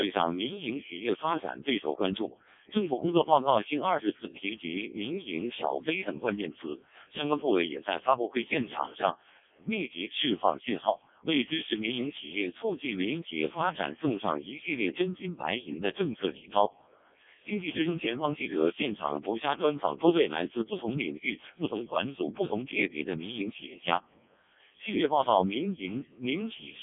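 Speech passes through a Codec 2 vocoder throughout. It sounds robotic and buzzy, rebuilt from sine waves, band-limited to 200 Hz–3.6 kHz. The heavy damage fits roughly 0.7 kbit/s.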